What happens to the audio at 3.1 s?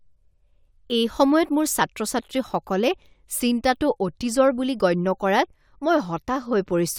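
Nothing goes wrong at 3.1 s; the speech carries on intact through that moment, with no dropout, click or other fault to be heard.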